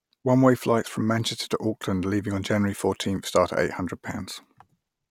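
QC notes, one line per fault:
No faults found in this clip.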